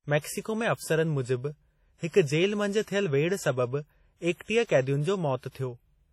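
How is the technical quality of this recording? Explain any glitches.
The quality is poor. Throughout the speech, the sound is ringing and washy, with hiss that swells and fades with the signal. Nothing reaches above 16.1 kHz. The likely cause is heavy WMA compression at a low bitrate, which fits around 32 kbps. Long transform blocks smear quantisation noise across tens of milliseconds and zero out weak detail.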